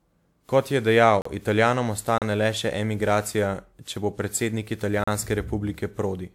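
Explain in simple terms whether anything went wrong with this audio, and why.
Yes, two things went wrong. The speech was most likely squeezed by a lossy codec about seven times over. That is generation loss: each pass adds fresh damage, so the whole clip sounds swirly, smeared and hollow, with blurred word onsets.

Separately, at 1.22 s, 2.18 s and 5.04 s the playback system likely failed to deliver audio in time. A block of digital silence about 35 ms long replaced the sound at each point. You hear each one as a brief hole.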